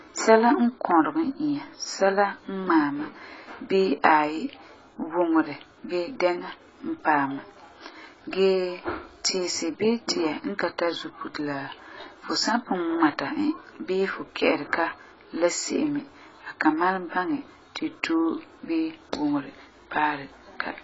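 Throughout the speech, nothing is present above 7.6 kHz, and the remaining spectrum is heavily damaged: dull, smeared, with a warbling, fizzy texture on sibilants and sustained sounds. This is likely AAC compression, AAC-LC coding consistent with a very low bitrate of around 16 kbps.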